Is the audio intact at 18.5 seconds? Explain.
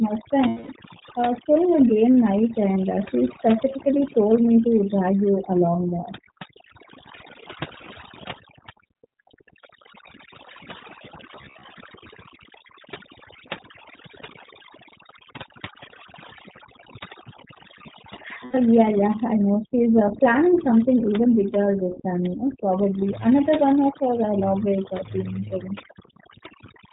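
No. From 18.45 to 18.55 s there is a 90 ms gap of lost iLBC frames, consistent with three dropped 30 ms frames. The decoder loops the last pitch cycle with added noise, so it sounds like a held, faintly buzzy vowel. On a spectrogram this shows as a run of flat, repeated harmonics, and the waveform shows a repeating cycle. The voice recovers almost at once after.

Overdone noise removal is also present at this moment. It pushes noise-level frequency bands down almost to silence, which breaks the background up into twinkling specks. A spectrogram shows the background as a dark field dotted with isolated bright flecks.

The iLBC codec is also present. It encodes each frame independently and discards everything above 4 kHz, giving a slightly rough, synthetic tone. On a spectrogram the energy stops sharply at 4 kHz.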